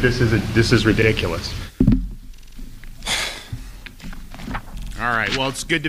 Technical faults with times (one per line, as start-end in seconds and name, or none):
1.02-1.07 repeated buffer
2.37-2.55 repeated buffer
4.78-4.92 repeated buffer